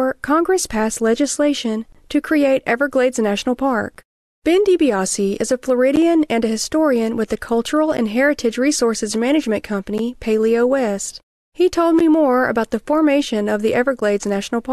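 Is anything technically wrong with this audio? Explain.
Yes. This speech has a gap at a join of encoded pieces, recurring every 2.0 s: at 1.92–1.95 s (about 23 ms, between "passed legislation" and "to create"), then about 11 ms each at 3.95, 5.96 (between "is a" and "and a historian with"), 7.97, 9.98, 11.99 (just before "more about the formation") and 14.00 s. The audio was encoded in 2-second chunks, and each chunk's start-up silence and end padding were kept when the chunks were joined. The result is a brief hole with edges smeared by the codec, after which the speech resumes exactly where it stopped. Random packet loss or dropouts would look different, with irregular spacing and no fixed interval, and concealment would usually fill the gap with smeared sound instead of leaving a hole.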